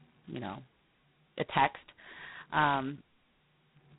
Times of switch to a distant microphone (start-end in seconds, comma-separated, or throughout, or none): none